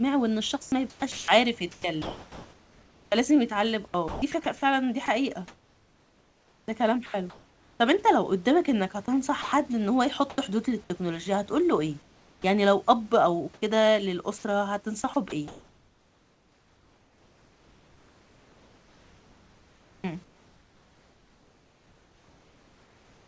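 Speech carried over a call path with nothing above 8 kHz, which fits a G.722 wideband codec, has sound chopped by the voice detector from 0.62 to 7.80 s, 9.06 to 10.38 s and 13.54 s to the end. Quiet edges repeatedly drop into synthetic fill, about 3.6 s, 0.2 s and 7.8 s in total, most likely because discontinuous transmission is gating too eagerly. From 12.02 to 12.44 s comes comfort noise in place of the background: one unbroken 0.42 s patch of featureless hiss, about 4 dB quieter than the real room noise, likely the receiver filling a pause.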